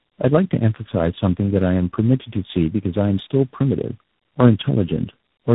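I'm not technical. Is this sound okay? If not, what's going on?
No. The call went through tandem speech coding: it crossed several phone networks, and at each handover the speech was unpacked and squeezed again by a different voice compressor, three of them in a row. Each one worked on the already damaged output of the one before, so the flaws stacked up. Throughout the clip, the speech sounds rough, muffled and warbly, with nothing above about 3.8 kHz, so it lacks crispness.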